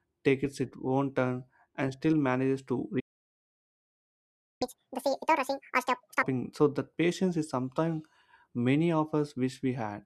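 A speech recording in which the sound cuts out at 2.99 s and stays silent until 4.62 s, a gap of about 1.6 s. This is a playback stall: the output stops mid-flow because the player was likely starved of incoming data or had its playback thread blocked, and nothing was rendered until it recovered. Delivery then resumes from the point where it stopped rather than skipping ahead.

Immediately after, from 4.62 s to 6.23 s, there is catch-up at higher speed. The player works through its accumulated backlog by resampling it at 2.0 times normal rate, so the audio rushes by with its pitch raised by roughly ten semitones, giving a clipped, chipmunk-like character. Because speed and pitch are tied together in this kind of resampling, both return to normal at the same moment, just before "so that".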